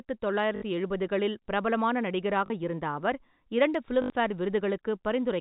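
Three short robotic stutters with a 50 Hz buzz interrupt this telephone-band speech, at 0.56–0.62 s, 2.46–2.50 s and 4.02–4.10 s. They come from packet loss with the last packet repeated: the receiver replays its final 20 ms packet to fill 60, 40 and 80 ms gaps, while the G.711 coding limits everything to below 4 kHz.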